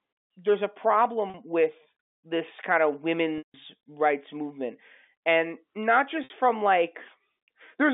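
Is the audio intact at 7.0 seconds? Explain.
Yes, the speech at 7.0 seconds is intact, carried cleanly through the narrow telephone band of the G.711 line with no fault at that moment.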